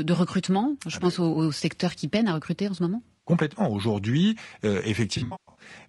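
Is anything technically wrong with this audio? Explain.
Yes. Throughout, the speech sounds rough and grainy, with noise filling the gaps between harmonics and a thin, synthetic-sounding top band. This is likely low-delay AAC compression (AAC-ELD): its short frames resolve pitch harmonics poorly, and the damage is consistent with a bitrate around 32 kbps.

From 3.11 to 3.31 s there is a smeared, noisy patch. This is AAC frame loss with concealment: about 120 ms of audio went missing, and the decoder rebuilt it from the last good spectrum rather than from the real signal.

From 5.17 to 5.65 s, losses are scattered over about 400 ms, with the longest gap around 150 ms. That stretch sounds smeared and phasey as the concealment repeatedly fills in and recovers.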